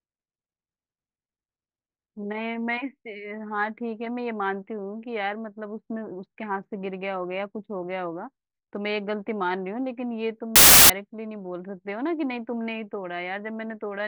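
From 10.56 to 10.90 s, the reader assembles samples from the wrong bytes: each value is built with its bytes misaligned or in swapped order, so the rapidly fluctuating low-order bits land in the most significant position. For those roughly 0.34 seconds the speech is replaced by a burst of loud, harsh broadband noise.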